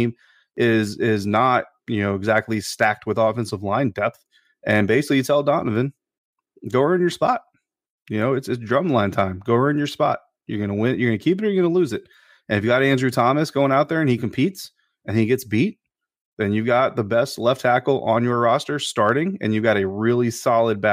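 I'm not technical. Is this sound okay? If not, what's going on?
Yes, this one's fine: nothing goes wrong with the recording at any point, so there's nothing you need to worry about.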